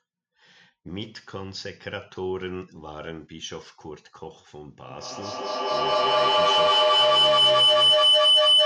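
At 4.89 s a feedback howl begins: a microphone and loudspeaker in the same room are joined in a loop that adds level on each pass, so the sound grows rather than dying away. The speech is swamped by a piercing tone near 3 kHz, fed back roughly every 200 ms as the loop cycles, climbing to about 17 dB above the speech and still sounding when the audio ends at 8.66 s.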